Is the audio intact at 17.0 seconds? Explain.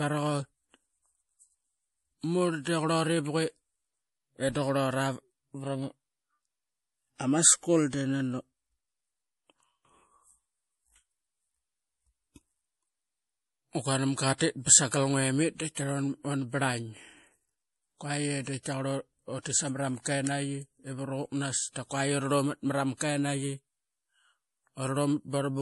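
No. At 17.0 seconds, as everywhere in this speech clip, the sound is dulled and watery, and the likely cause is MP3 compression at a low rate, which fits roughly 48 kbps. Short of bits, the encoder removes everything above 11.5 kHz and drops weak frequency lines that flicker on and off between frames, so s sounds turn swirly and metallic. A spectrogram shows a hard ceiling at 11.5 kHz with speckled, patchy gaps beneath it.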